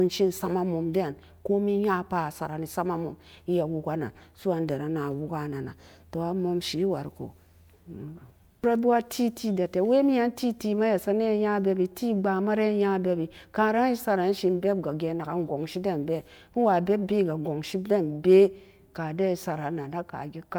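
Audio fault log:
No faults detected anywhere in the speech recording.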